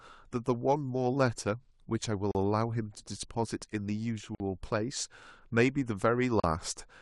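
Speech cut by two hard-edged silent holes, at 2.31 s (36 ms) and 6.40 s (37 ms): a gap between stream segments, fitting 2-second segments, with the player filling each timing gap with silence.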